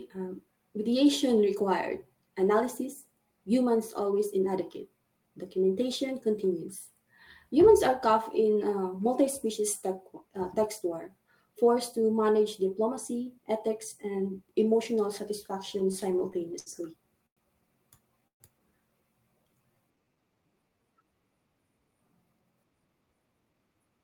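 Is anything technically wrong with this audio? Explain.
Yes, the speech has four kinds of network-related timing faults in its final stretch.

From 15.79 to 16.69 s the audio drags and stutters through nine brief stalls, the longest 69 ms. These repeated stalls (stutter) happen when late packets keep draining the jitter buffer.

At 17.26 to 17.40 s and again at 18.27 to 18.43 s, the sound stops and falls nearly silent for about 100 ms and then 120 ms before resuming. These call audio freezes are likely from packets held up in transit.

From 19.38 to 21.04 s the speech runs slower at unchanged pitch, about 89% speed, stretched by 183 ms. This jitter buffer slow-down comes from the receiver repeating pitch periods to rebuild its reserve.

From 22.70 to 23.99 s the speech hurries at about 115% speed, still at the same pitch. In this jitter buffer speed-up the receiver trimmed roughly a fifth of a second to cut its delay.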